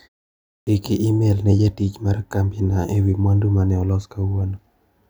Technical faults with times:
0.38-0.67 clipped start after a pause

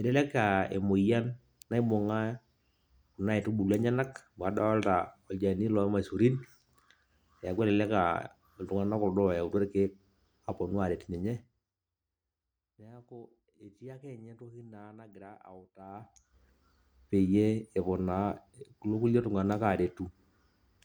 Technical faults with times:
15.86-16.38 zipper noise

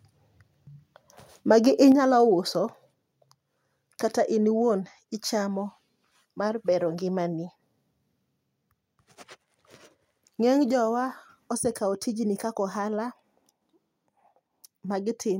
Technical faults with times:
1.92 microphone volume stepped down
2.94 microphone volume stepped down
4.62 microphone volume stepped down
10.71 microphone volume stepped down

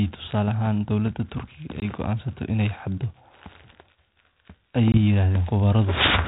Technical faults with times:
1.80-1.83 packet loss on an ADPCM call
4.92-4.98 packet loss on an ADPCM call

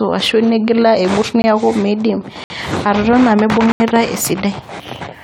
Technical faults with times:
0.00-5.24 generation loss
1.42-1.44 block of digital silence
2.44-2.50 block of digital silence
3.72-3.80 block of digital silence

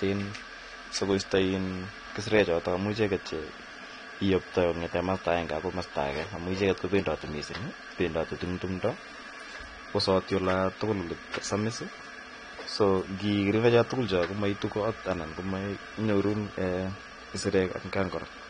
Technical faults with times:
0.00-18.49 AAC compression

